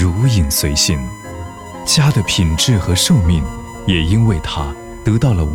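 From the start to the end of the clip, a steady USB whine runs under the sound. It is a fixed tone at 1 kHz, and that is where it is strongest. The pitch matches the USB bus's 1 ms frame rate. The bus pulls current in bursts once per frame, and that ripple leaks into the audio through the power or ground. The whine sits roughly 25 dB below the signal.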